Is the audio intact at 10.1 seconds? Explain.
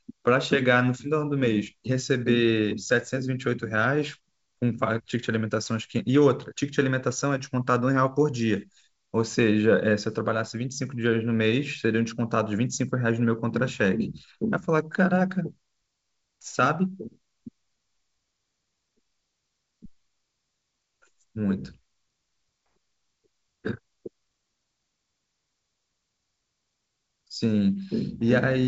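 Yes, the audio is intact at 10.1 seconds, with nothing there beyond the usual character of G.722 wideband telephone coding at 64 kbit/s, which leaves no content above about 7.7 kHz.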